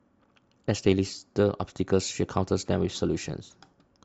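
No faults can be heard anywhere in the recording.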